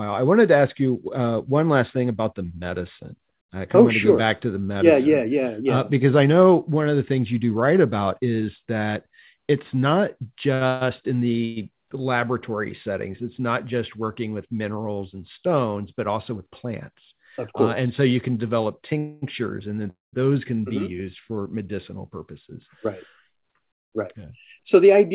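At 10.54 s a short stall from a late packet holds the sound for 69 ms. The jitter buffer ran empty, the receiver stretched the last sound until the packet arrived, and playback resumed from the same point with nothing lost. It is heard as a briefly sustained moment with a slight buzz or dip.

Call audio freezes follow at 10.67 s (140 ms), 11.45 s (114 ms), 18.98 s (240 ms) and 19.90 s (227 ms). Each continues the last sound as a fading buzz or hiss, and the final one decays into about 160 ms of silence. The likely cause is packets held up in transit that emptied the buffer. Audio resumes where it stopped with nothing missing.

Jitter buffer speed-up runs from 15.57 to 16.73 s at 107% speed and from 22.10 to 25.13 s at 105%. The receiver removed short pitch-period pieces, roughly 100 ms and then 150 ms in total, to reduce excess buffered delay. The audio sounds hurried while keeping its pitch, all within the 4 kHz bandwidth of the G.711 call path.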